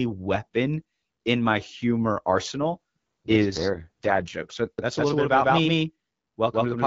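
Just after "weapon in my humor", at 2.62 s, an AMR rate drop sets in and lasts until 4.34 s. The link weakens, so the codec is told to spend fewer bits on the sound and more on error protection. The bandwidth holds and nothing drops out. The speech turns rough, buzzy and synthetic instead. That fits a fall from 12.65 to 6.6 kbit/s. At 4.34 s the clarity of the AMR wideband codec at its normal rate returns.

At 4.78 s a doubled audio track appears and runs to the end. A second full-band copy of the speech trails the first by roughly 150 ms, at about the same level. It has no decay and no room sound, so it reads as a hard slapback rather than an echo. It starts abruptly. The likely cause is the signal being captured twice, once through a slower path.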